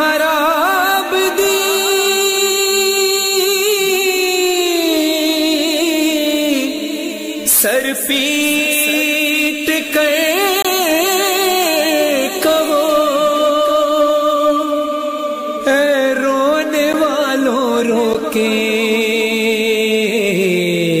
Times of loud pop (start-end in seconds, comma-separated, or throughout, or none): none